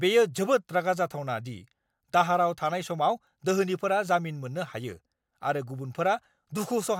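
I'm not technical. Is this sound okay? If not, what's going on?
Yes, this one sounds fine, and there's nothing here that needs fixing.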